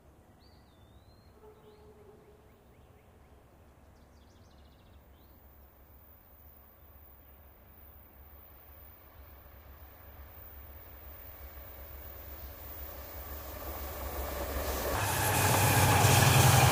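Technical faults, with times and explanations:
14.95 to 16.71 s: section at the wrong speed. The final stretch of sound abruptly turns higher and hurried, running 1.49 times too fast with pitch raised by about seven semitones. Speed and pitch rise together, which most likely means this part was played against the wrong clock.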